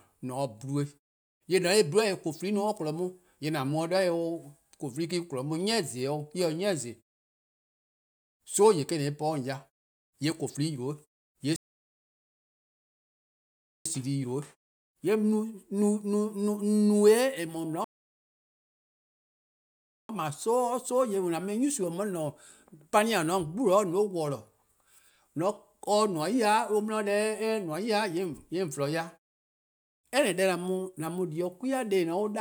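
At 11.56 s and again at 17.84 s the speech halts in a rebuffering stall, silence for about 2.3 s and 2.2 s, then resumes exactly where it stopped, adding time without losing content.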